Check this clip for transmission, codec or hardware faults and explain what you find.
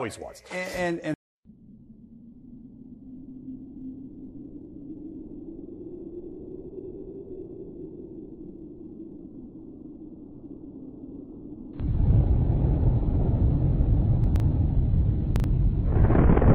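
Two short disruptions occur near the end. From 14.24 to 14.40 s and from 15.36 to 15.44 s, the sound jumbles briefly. These are chunks out of order. A 40 ms chunk arrived three chunks late in the first event and one chunk late in the second, so it played after its successors, creating hard joins.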